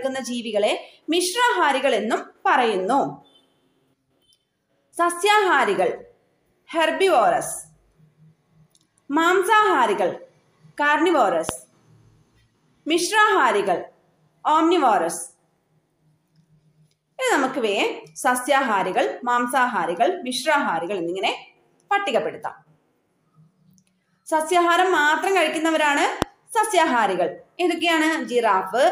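At 11.49 to 11.51 s there's a loud pop, a single sharp hit sitting well above the sound, roughly 15 dB over it. A second, stronger one lands at 26.22 to 26.24 s, around 20 dB up. Both last only a couple of hundredths of a second, and the sound carries straight on underneath. The likely cause is a sudden voltage step or spike, say from a plug, a switch or static, that gets shaped into a brief click-thump on the way through.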